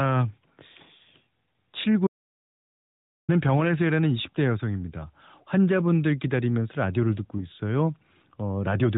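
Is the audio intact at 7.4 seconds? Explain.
No, lost AMR speech frames hit at 7.38 to 7.48 s. A checksum failure on a single frame made the decoder reuse earlier pitch and vocal-tract settings at falling gain, giving a brief dip or warble.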